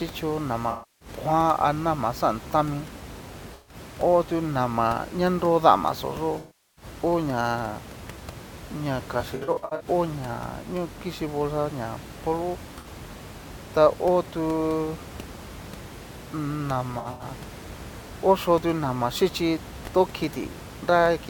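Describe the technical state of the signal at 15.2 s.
At 15.2 s the speech signal is intact, with only the room's own background noise sitting about 16 dB below the voice.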